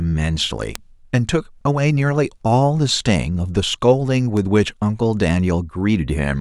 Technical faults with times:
0.75 bit error spike
2.91 bit error spike
4.37 bit error spike

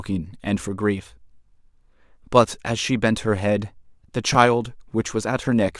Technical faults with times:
4.35 dropped buffer (overrun)

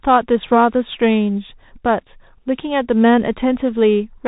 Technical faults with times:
0.00-4.27 Bluetooth CVSD headset codec

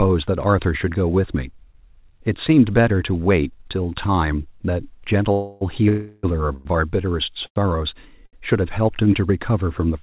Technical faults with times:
5.32-5.63 call audio freeze
5.89-6.25 call audio freeze
6.53-6.67 call audio freeze
7.46-7.58 short stall from a late packet
8.26-8.35 short stall from a late packet

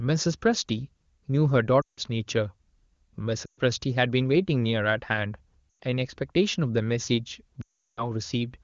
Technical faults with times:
1.81-2.00 lost AMR speech frames
3.45-3.60 lost AMR speech frames
5.70-5.78 lost AMR speech frames
7.62-8.03 lost AMR speech frames

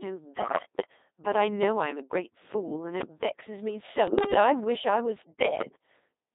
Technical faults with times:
0.00-6.34 Codec 2 vocoder
0.39-0.65 bit errors on digital voice radio
4.07-4.33 bit errors on digital voice radio

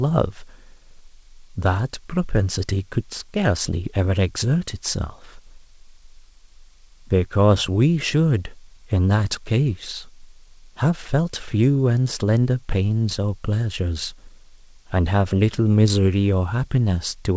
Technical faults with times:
none

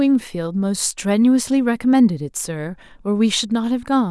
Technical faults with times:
none

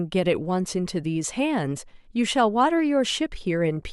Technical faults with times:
none

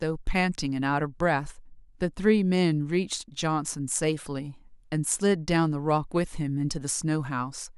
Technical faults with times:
none

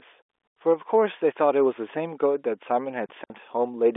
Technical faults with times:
3.06-3.30 packet loss filled with silence

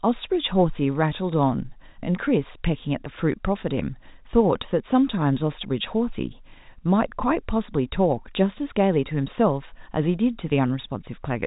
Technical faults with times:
none

